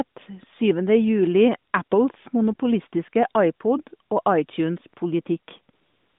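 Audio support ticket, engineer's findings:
AMR comfort noise at 1.72 s, 1.84–1.92 s, and 5.74 s to the end. Speech frames stop over the narrowband AMR line, and the receiver substitutes smooth synthetic noise for the real background.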